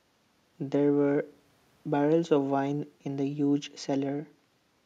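No technical faults occur at any point in the speech, so there is nothing to describe in time order.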